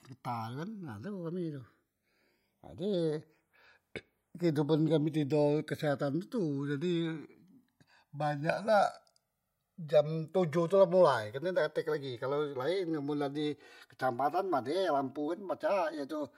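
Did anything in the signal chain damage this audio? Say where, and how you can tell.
Yes. The damage is at the converter stage: the two channels were captured by devices running on separate clocks that disagree by a few hundred parts per million, so the inter-channel delay grows steadily across the whole clip, reaching roughly 3 ms by the end. Heard in mono, the speech takes on a slow flanging quality as the comb-filter notches from the summed channels sweep gradually through the spectrum. That is channels drifting apart.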